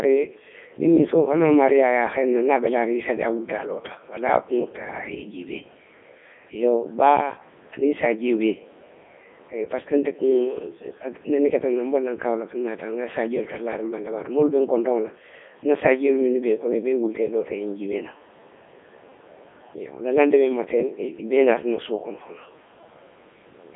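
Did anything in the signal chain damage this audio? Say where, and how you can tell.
Yes, at the codec stage, and it runs the whole clip. This is the Codec 2 vocoder: the speech has that robotic, buzzy quality you get when only pitch, voicing, energy and a rough spectral envelope are sent, and the decoder rebuilds everything from sine waves. The damage is heavy, the band sits at roughly 200 Hz to 3.5 kHz with nothing above 3.6 kHz, and it is running in its top 3.2 kbit/s mode.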